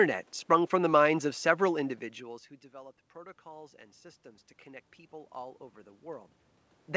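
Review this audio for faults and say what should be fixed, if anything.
Automatic gain rising, from 2.25 s to 6.32 s. Around 2 s the talker moves away and the level at the microphone drops by about 24 dB. The automatic gain control treats this as a quiet input and gradually raises its gain by about 8 dB over roughly four seconds, so the speech and the room noise swell together. Keeping the talker at a steady distance, or capping how far the gain control can climb, would prevent this.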